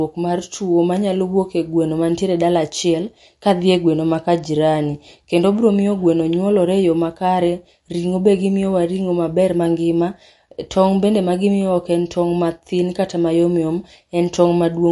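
From start to finish the speech carries plainly audible codec damage, most likely MP3 compression at a low bitrate, roughly in the region of 48 kbps. The treble stops abruptly at 11.3 kHz, where the encoder has discarded the upper band to save bits. Below that, weak frequency components are dropped and restored from frame to frame, giving sibilants a swirly, watery texture with metallic chirps, and consonant onsets sound smeared rather than crisp.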